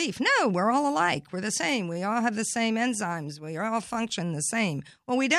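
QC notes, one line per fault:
No faults found in this speech clip. Nothing here needs a QC flag.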